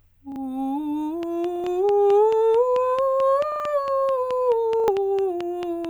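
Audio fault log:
0.32–0.36 s, repeated buffer: a brief stutter in the music as a 40 ms piece plays twice with a hard join, pointing to a late audio buffer.
1.56–1.64 s, 3.52–3.60 s, 4.80–4.88 s, repeated buffer: each time a 40 ms piece sounds three times over, a choppy stutter dropping around 70 ms of music because new buffers arrived late.
1.23–5.86 s, train of clicks: about twenty near-identical ticks at a regular 4.55 per second, peaking about 10 dB above the music, likely from interference by nearby equipment.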